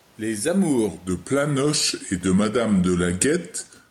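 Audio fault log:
Throughout: gain pumping. The gain swings by around 5 dB, so loud and soft parts sit close in level and sound squashed. The likely cause is input gain set too high with a fast limiter pulling it down on each peak.
0.88 to 3.90 s: section at the wrong speed. From 0.88 s to the end, the speech plays at 0.893 times its recorded rate. Tempo and pitch drop together, leaving it slower and about two semitones deeper. This likely comes from playback against the wrong clock.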